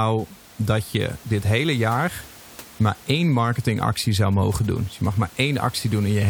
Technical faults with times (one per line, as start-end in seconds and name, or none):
none